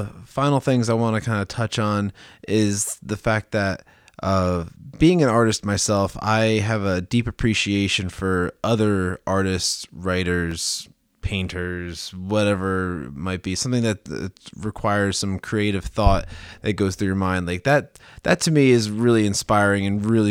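At 10.51 s there is a repeated buffer. New audio reached the device too late. The device filled the gap by playing its last buffer one extra time. That buffer lasts about 1.45 ms, which fits a 64-sample buffer. The piece is far too short to hear as a stutter in the speech. The hard joins at each end come through as a single sharp click instead. About a millisecond and a half of the real signal is pushed aside.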